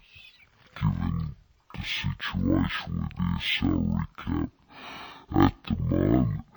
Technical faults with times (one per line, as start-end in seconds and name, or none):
0.00-6.56 stereo read as mono